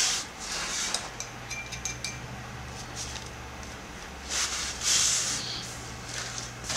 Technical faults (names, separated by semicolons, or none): none